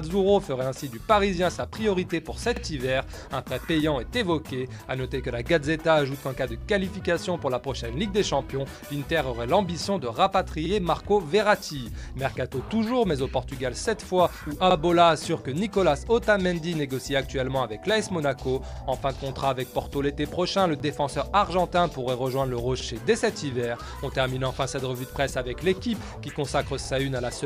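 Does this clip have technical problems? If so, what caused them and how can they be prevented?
Yes: overlapping chunks at 2.56, 6.61, 10.66, 14.71, 18.76, 22.80 and 26.85 s replay about 48 ms at each 4 s join, a stutter rather than a gap. Prevent it by aligning chunk boundaries exactly, or by trimming each chunk's overlap before joining.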